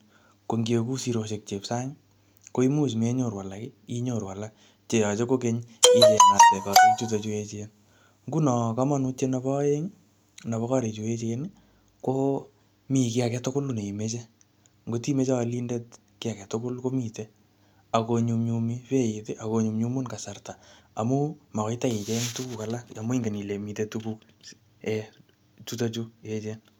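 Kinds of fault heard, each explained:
Drift correction step: From about 12.05 to 12.67 s the speech suddenly runs roughly 5.5% fast, and the pitch rises by about 93 cents, close to a semitone, for a bit over half a second before dropping straight back. Speed and pitch move together, so it's a resampling jump rather than a pitch effect. That's likely a clock-matching stage nudging its playback rate in one step to catch up on its buffer.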